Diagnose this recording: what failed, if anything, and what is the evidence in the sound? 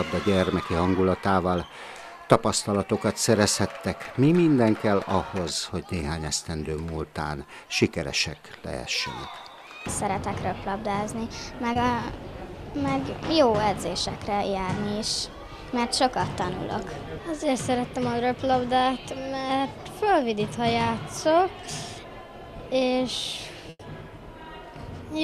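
The network failed, briefly. At 11.73 to 11.77 s there is a short concealed packet loss. About 20 ms of audio never arrived in time. The receiver extended the preceding sound to cover the hole, then blended back. That leaves a brief smear.

A burst of packet loss follows at 23.69 to 23.81 s, also a network fault. About 100 ms went missing. The receiver held and faded the last sound across that span, then dropped to about 40 ms of silence. The audio resumes further on, with that stretch gone.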